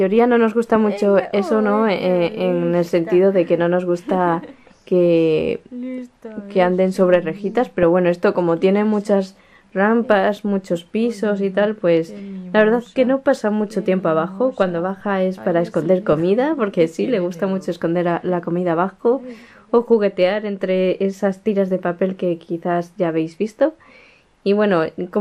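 Low-rate MPEG Layer II coding, likely MP2 at a bitrate around 80 kbps to judge by the damage, starves the upper sub-bands, leaving the audio dull, gurgling and granular throughout. At 7.83 s, DAB burbling appears as a brief burst of bit errors slips past error correction, corrupting roughly one frame into a few watery blips.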